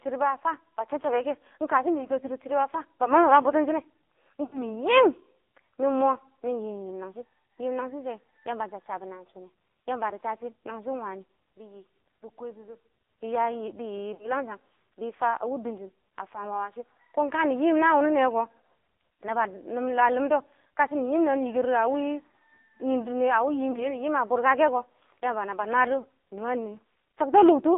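The whole clip passes through the AMR narrowband mobile codec. Nothing sits below about 250 Hz or above 3.7 kHz. The speech is buzzy and synthetic, with heavy codec damage. That fits a low AMR-NB mode near 5.9 kbps.

Lost AMR speech frames break the speech four times: 4.44 to 4.63 s, 14.14 to 14.32 s, 23.72 to 23.87 s, and 26.00 to 26.06 s. The decoder repeats the last sound with falling gain. The longer gaps smear and fade, and the short ones warble briefly.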